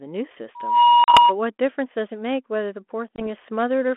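From 0.55 s to 1.35 s a loudspeaker feedback squeal takes over. The microphone is hearing the loudspeaker it drives, and at 960 Hz the loop gain has passed one, so that single tone swells over about a third of a second to roughly 10 dB above the speech. Unlike a steady hum or whistle picked up from outside, it starts faint and grows on its own, and it is locked to one pitch.

Inside the squeal, at 1.04 s to 1.18 s, comes packet loss on the ADPCM call: a 40 ms hard-edged gap, which points to about two lost packets. A second, 20 ms hole follows at 3.16 s to 3.27 s. Each time the receiving decoder's adaptive predictor and step size have drifted from the sender's, so the sound returns slightly distorted before settling over some tens of milliseconds. That recovery tail sets it apart from a plain dropout, which would resume cleanly. The narrowband coding underneath, consistent with 32 kbit/s G.726, adds only light coding damage and caps the band at 3.4 kHz.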